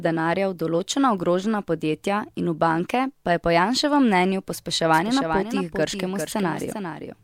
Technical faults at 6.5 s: doubled audio track

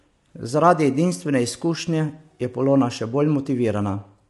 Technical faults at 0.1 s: low-delay AAC compression

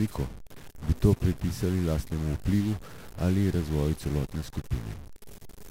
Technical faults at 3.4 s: stuck bit

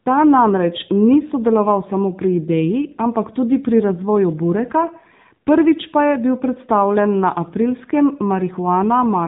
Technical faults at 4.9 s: AMR narrowband mobile codec

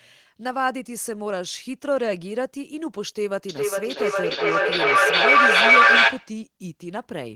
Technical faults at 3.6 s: feedback echo between two devices

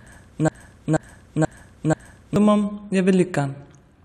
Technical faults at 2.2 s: broken-record loop

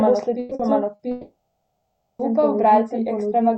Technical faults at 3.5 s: doubled audio track

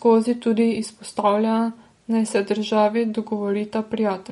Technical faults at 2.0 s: MP3 compression

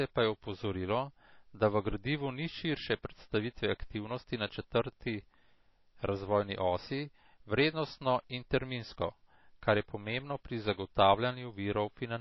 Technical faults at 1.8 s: MP3 compression

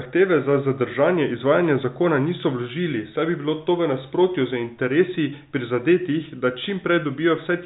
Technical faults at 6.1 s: none

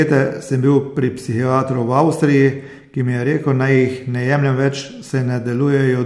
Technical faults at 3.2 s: none

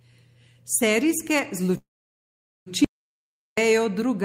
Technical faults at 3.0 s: audio dropout to silence

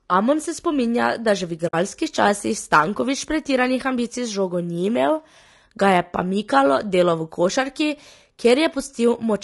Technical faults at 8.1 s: low-delay AAC compression

